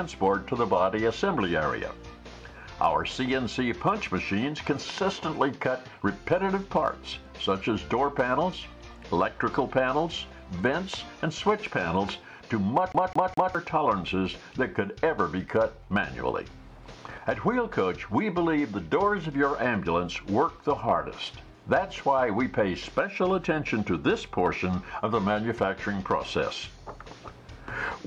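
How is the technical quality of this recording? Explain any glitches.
One glitch stands out. From 12.92 to 13.55 s, the CD gets stuck on one turn. A scratch throws the laser back, so a 0.21 s fragment repeats three times, with fast, even stutters.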